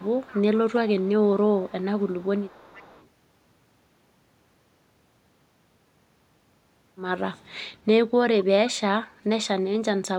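A far end's echo canceller likely let loudspeaker pickup through, producing echo leak from 0.0 to 0.58 s, 0.88 to 1.29 s and 1.6 to 3.07 s: a faint copy of the speech trails by 471 ms, roughly 20 to 25 dB below it.

At 9.75 to 9.86 s the echo canceller, likely confused by both sides talking at once, clamps down on the near talker. This is speech suppressed in double talk, where the speech briefly drops by around 40 dB for about 100 ms.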